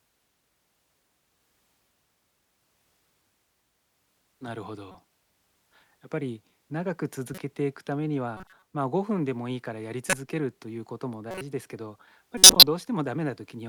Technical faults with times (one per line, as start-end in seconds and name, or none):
4.88-4.95 corrupt frame decoded
7.33-7.38 corrupt frame decoded
8.37-8.63 corrupt frame decoded
10.09-10.13 corrupt frame decoded
11.31-11.41 corrupt frame decoded
12.37-12.63 corrupt frame decoded